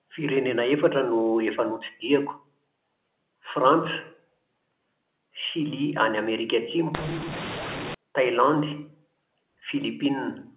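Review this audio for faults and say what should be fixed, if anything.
From 6.94 to 7.94 s the speech turns harsh, with hiss in the gaps: a mu-law and A-law mix-up, where mu-law samples are read back as A-law. To prevent it, tag the G.711 law explicitly and make sure the decoder checks it rather than assuming a default.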